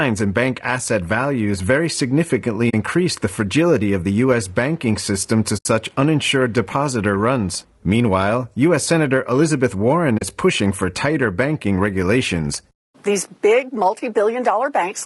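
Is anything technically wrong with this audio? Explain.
Yes. Throughout, the speech sounds rough and grainy, with noise between harmonics and a dull, synthetic top band, likely low-delay AAC compression (AAC-ELD) at around 32 kbps.

AAC frame loss with muting occurs at 2.69–2.74 s after "asset values very significantly", at 5.57–5.66 s after "banking system to", and at 10.17–10.22 s before "pushing for tighter banking". Each is a soft-faded silent gap, lasting about 40, 80 and 40 ms. This fits lost frames whose spectra were zeroed by the decoder.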